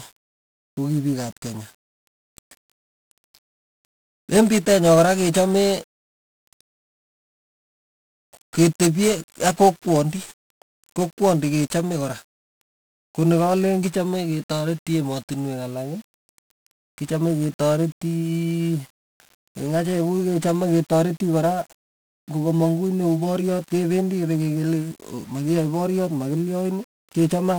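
From start to finish the speech carries heavy 1-bit DFPWM compression damage. Each sample is reduced to a single up-or-down step of an adaptive level, consistent with a stream of about 48 kbps, leaving dense broadband quantisation noise: fuzzy, crackly texture with the treble dulled or buried in hiss.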